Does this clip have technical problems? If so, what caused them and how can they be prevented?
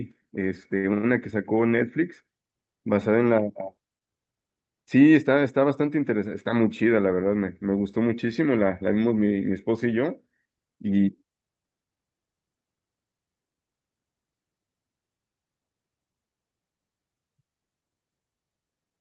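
Yes. Two short stalls from late packets occur at 0.77–0.86 s and 0.94–1.05 s. Each time the jitter buffer ran dry, and the receiver held the last sound for about 62 ms and then 97 ms before resuming without losing audio. A slightly larger jitter buffer minimum, or steadier packet delivery through network QoS, would prevent these stalls.

A jitter buffer speed-up runs from 11.03 to 11.89 s. The buffer had grown beyond its target, so the receiver trimmed pitch-period slices and played the speech about 11% faster at unchanged pitch, removing roughly a tenth of a second. Reducing bursty packet arrival prevents the buildup that triggers this catch-up.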